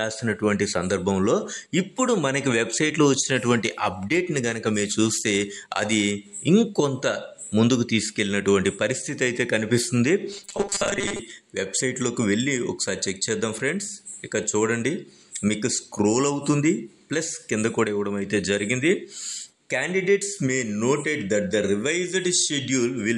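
From 10.29 s to 11.22 s the sound turns into a rigid, metallic buzz at 200 Hz, the robotic sound from repeated short buffers. The cause is likely late-arriving audio being covered by replaying a 5 ms chunk, so about half the material is replaced by repeats while the audio they stand in for is skipped. Unlike mains hum or feedback, the buzz is not a separate steady tone; it still roughly tracks the underlying sound's shape and timing.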